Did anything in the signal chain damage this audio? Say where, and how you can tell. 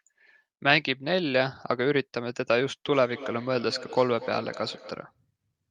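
Yes. From 2.87 s to 5.16 s there's a feedback echo between two devices, which points to the call-processing stage. The speech comes back at a steady gap of roughly 200 ms, peaking about 16 dB below the direct sound. That fixed spacing gives it away: a second device in the room plays the call out loud, this mic picks it up again, and neither echo canceller is built to remove sound played by the other device.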